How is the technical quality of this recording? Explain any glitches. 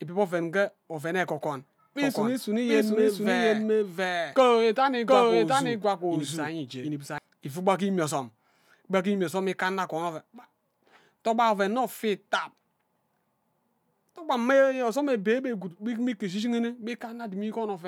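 The recording has one clear glitch, a doubled audio track.

From 2.02 to 7.18 s the speech plays twice, a second full-band copy trailing about 0.7 s behind at roughly equal loudness, likely from a second, slower capture path. It starts and stops abruptly, without reverb. A spectrogram shows every pattern repeated, time-shifted.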